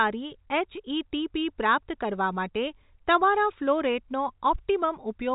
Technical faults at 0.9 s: none

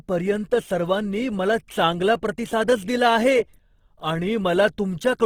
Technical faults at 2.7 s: Opus compression

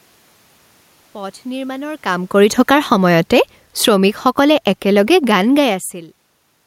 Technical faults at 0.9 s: none

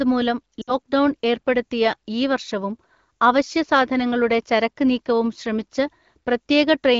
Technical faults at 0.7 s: lost AMR speech frames

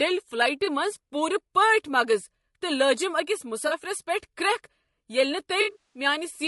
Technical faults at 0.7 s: low-delay AAC compression; AAC frame loss with concealment

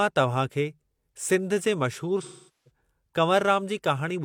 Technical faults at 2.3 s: AAC frame loss with concealment

